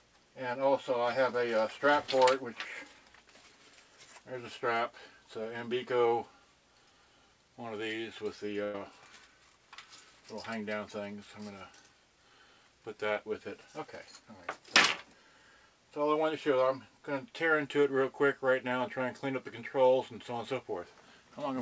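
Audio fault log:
8.64 to 8.76 s, burst of packet loss: about 100 ms of audio never arrived, so the receiver held and faded the last sound, then resumed beyond the missing stretch.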